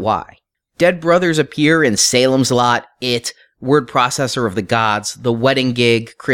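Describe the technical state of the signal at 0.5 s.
At 0.5 s the speech signal is intact, with no audible fault at that moment.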